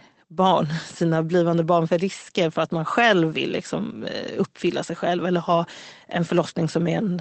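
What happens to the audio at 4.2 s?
Nothing goes wrong at 4.2 s: the speech carries on intact there, with only the band-limited, coded sound of the Opus call path, which tops out around 8 kHz.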